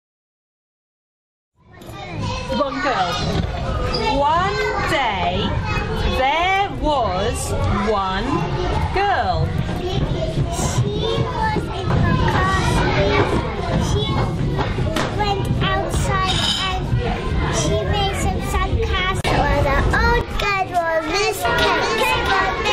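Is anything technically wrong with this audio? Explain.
Yes. A doubled audio track starts at 21.08 s and runs to the end. A second full-band copy, about 5 dB quieter, trails the original by roughly 0.7 s, likely from a slower second capture path. It enters abruptly, without decay or room colour, so the sound is heard twice out of step.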